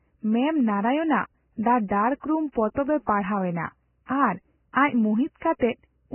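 The whole speech clip has heavy coding damage. Nothing is heard above 3 kHz, so the sound is dull and boxed in. What treble remains is hissy and grainy. Tones sound rough and attacks are blurred. This is likely Vorbis compression at a very low bitrate, around 10 kbps. The encoder cuts the top band and quantises the rest so coarsely that fine detail turns into noise.

At 1.63 to 1.65 s there is pre-echo. A short hiss runs for about 24 ms before a sharp onset. The coder spread its noise across a whole block, so the quiet moment before the attack filled with it. Just after "ᱯᱟᱲᱦᱟᱣ ᱮᱱᱟ ᱟᱨ ᱟᱡ", at 5.39 to 5.42 s, it happens again over 27 ms. A third case follows at 5.59 to 5.61 s, lasting 24 ms. Each attack sounds smeared and soft.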